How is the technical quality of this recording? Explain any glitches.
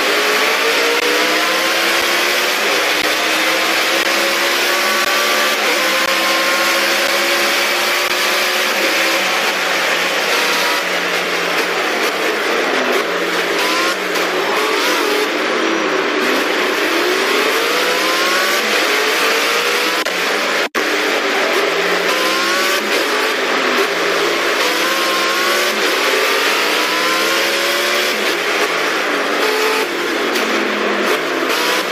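The recording has one recurring glitch, a gap between stream segments, heard eight times at 1.0, 2.02, 3.02, 4.03, 5.05, 6.06, 7.07 and 8.08 s. The timestamps of consecutive one-second segments fail to meet, leaving a space of about 6 to 17 ms that the player fills with silence. Nothing is missing from the audio. Instead, the sound is briefly interrupted by a hard-edged hole roughly once a second, and the timing drifts slightly later with each gap.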